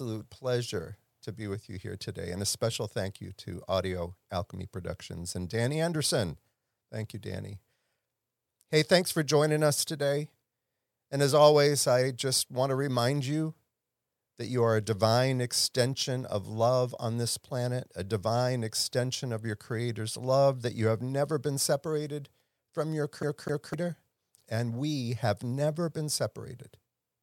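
The laser jumps back one track each turn, a CD stuck on one turn. After "been separated from your", 23.23 to 23.74 s, a 0.25 s slice repeats twice.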